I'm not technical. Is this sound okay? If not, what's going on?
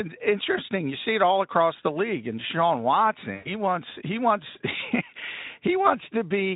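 No. At about 3.35 to 3.53 seconds, the speech is hit by VoIP packet loss concealed by the speech codec. About a tenth of a second of the call's data never arrived, so the decoder filled the hole by stretching the last bit of voice it had, and that filler fades as it runs out. Unlike a plain dropout, there's no clean silence; instead you hear a brief buzzy, smeared tone that dies away, with the voice sounding weak for a moment after it returns.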